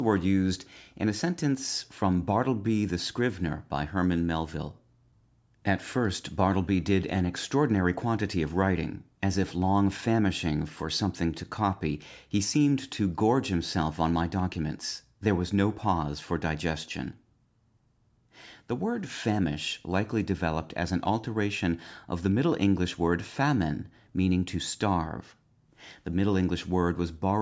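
No technical faults can be heard in this speech clip. It has passed through a call's microphone processing, which leaves nothing above 8 kHz and takes out the lowest bass as that path normally does.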